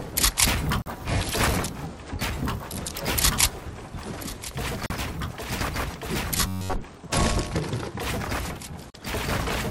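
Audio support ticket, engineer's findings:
Gap at a join of encoded pieces, 0.82 s, 4.86 s, 8.90 s: 40 ms silences every 4 s, smeared edges. Separately encoded segments joined untrimmed; encoder delay and last-frame padding left in.

Robotic sound from repeated short buffers, 6.38–6.75 s: rigid metallic buzz near 94 Hz. Likely cause: late playback buffers, about 11 ms of audio looped while most real audio is skipped.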